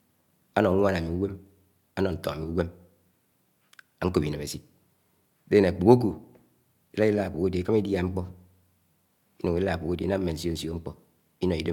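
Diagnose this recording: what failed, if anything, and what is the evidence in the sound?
Nothing seems to have gone wrong anywhere along the chain here, as the speech holds together steadily and there's nothing in the sound that points to trouble at any stage.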